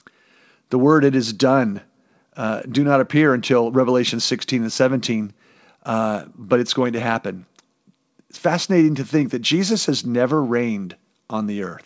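Nothing's wrong with this speech clip: it's carried over a call link whose sound stops at about 8 kHz, which fits a wideband codec like G.722, and nothing in it stands out as a fault.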